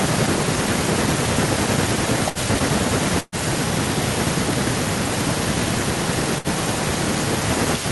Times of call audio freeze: none

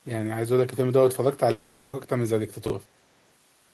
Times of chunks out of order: 2.66-2.70

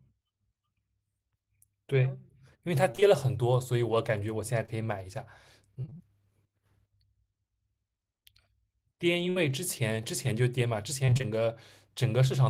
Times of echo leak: none

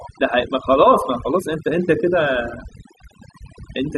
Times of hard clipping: none

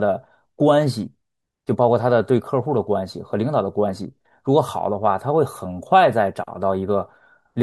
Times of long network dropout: none

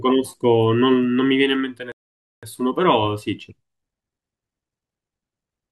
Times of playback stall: 1.92-2.43

